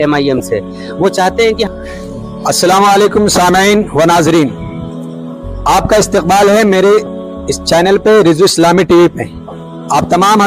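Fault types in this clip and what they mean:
Lost LE Audio frames: Bluetooth LE Audio frames went missing and the LC3 decoder filled each gap by replaying the last spectrum with randomised signs, leaving a brief noisy smear instead of silence. Here it happens from 0.38 to 0.40 s, about 20 ms, which fits two 10 ms frames, and again at 7.06 s, about 10 ms, fitting one. Unlike a plain dropout, the gap is filled with smeared sound rather than cut to silence.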